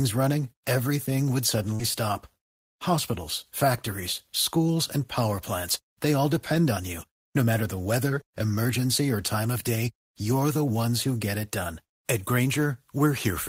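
Just after "running everything would", from 1.75 to 1.82 s, there is short concealed packet loss. About 40 ms of audio never arrived in time, and the receiver covered it by extending the preceding sound, which adds a few milliseconds. The result is a brief smeared wobble before the audio blends back in.

Inside that stretch, at 1.79 to 1.81 s, is a lost packet rebuilt from error correction. The 20 ms of audio there came from a low-bitrate redundant copy carried in the following packet, so there is no gap, only a rougher, noisier texture. The same fault recurs at 4.18 to 4.20 s, just before "schools and power plants", where a single rebuilt 20 ms frame adds a short grainy patch.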